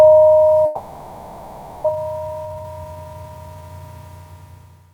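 A long network dropout from 0.65 to 1.90 s is the likely cause of a stretch where the sound is continued as a fading buzz or hiss, with about 0.78 s of audio lost. A jitter buffer speed-up then runs from 1.92 to 3.80 s: repeated pitch-period cuts play the audio at 122% speed and the same pitch, shedding roughly 0.4 s of built-up delay.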